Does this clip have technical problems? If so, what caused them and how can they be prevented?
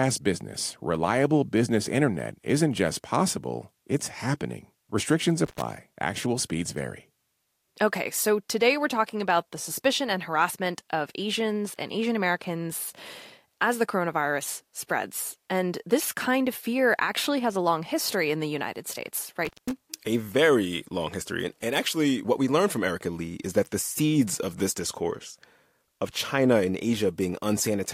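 Yes: intermittent contact at 5.45–5.62 s and 19.45–19.71 s, where a loose plug briefly opens. The crackle at each edge distinguishes it from a clean digital dropout. Secure and replace worn cables.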